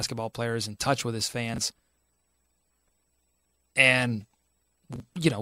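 Speech, with two brief jumbled moments where chunks play out of order, at 1.54 to 1.58 s and again at 4.96 to 5.0 s. In each, a 20 ms block of audio arrives one chunk late and is played after the block that should follow it, so the two swap places, leaving three hard joins. Unlike a dropout or skip, nothing is missing; the sound is all there but briefly scrambled.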